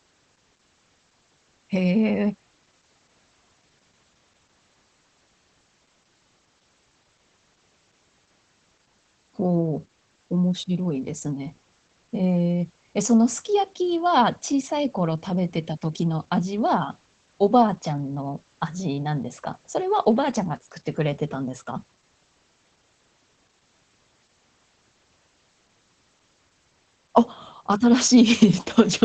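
Throughout, low-rate Opus voice compression in SILK wideband mode, consistent with about 12 kbps, removes everything above 8.4 kHz and coarsens the excitation, leaving the speech muffled, hoarse and faintly robotic.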